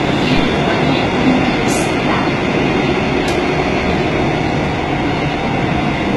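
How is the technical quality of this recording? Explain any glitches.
The technical quality is poor, with heavy codec damage running through the whole clip. The treble sounds gritty and metallic, and nothing survives above about 11.8 kHz. The likely cause is HE-AAC compression at a very low bitrate, consistent with roughly 16 kbps. Only the lower spectrum is truly coded; the highs are rebuilt by copying lower bands upward. On a spectrogram the top band shows repeated, smeared patches ending in a flat wall at 11.8 kHz.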